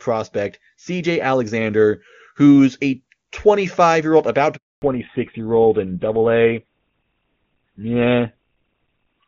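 Speech carried over a mobile call, clean and wideband at the start, consistent with AMR-WB at a high rate such as 23.85 kbit/s, with faint or no codec damage. Just after "year old about", a handover gap opens at 4.56 s: the sound dies away and stays silent for 260 ms until 4.82 s, as the call switches networks and no frames arrive to fill the interval. From 4.82 s to the end the call shows a fallback to narrowband. Nothing above 4 kHz remains, so the speech turns duller and rougher, which fits a drop to an older codec such as GSM full rate.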